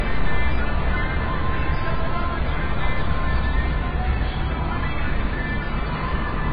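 AAC compression damage runs throughout: nothing above 5 kHz, heavy dull smearing, likely from AAC-LC squeezed to a very low bitrate around 16 kbps.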